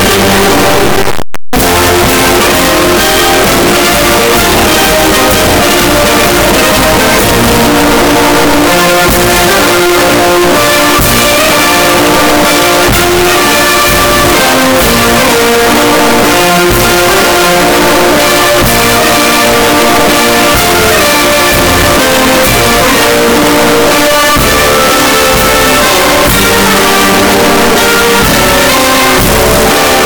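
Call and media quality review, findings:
Signed and unsigned mixed up, whole clip. Very loud, harsh distortion throughout. Quiet passages as loud as the rest. Likely cause: 8-bit samples read with the wrong sign convention. Top bit flipped, so every zero crossing jumps full range.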